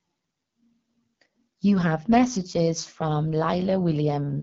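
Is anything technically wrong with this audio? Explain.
Yes. The speech carries AMR wideband (HD Voice) codec damage from start to finish. The codec models speech below 6.4 kHz as pulses driving a vocal tract filter. It fills the band from 6.4 to 7 kHz with shaped noise. Here the damage is plainly audible. Voiced sounds come out rough and raspy, and the top of the band has a hissy, synthetic edge. This fits one of the two lowest AMR-WB rates, around 8.85 kbit/s.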